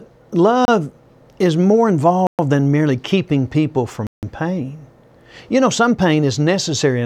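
A speech recording with three blocks of digital silence, where the signal drops straight to silence and comes back with no fade. The first, from 0.65 to 0.68 s, lasts only 28 ms. The others, 2.27 to 2.39 s (120 ms) and 4.07 to 4.23 s (160 ms), are long enough to hear as real holes. The pattern points to the output buffer not getting filled in time.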